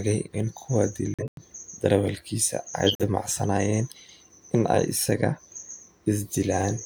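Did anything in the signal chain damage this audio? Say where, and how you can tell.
Yes, at the codec stage: corrupt frame muted. The speech drops abruptly to silence from 1.14 to 1.42 s and from 2.87 to 3.03 s, gaps that fit five and three whole frames. The decoder rejected bit-damaged frames, the player substituted silence, and timing held.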